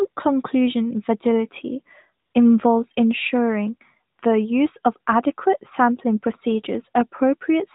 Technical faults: AMR comfort noise

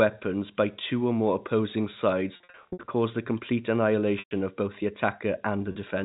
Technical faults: packet loss with pitch repetition

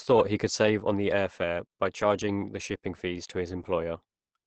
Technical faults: Opus compression

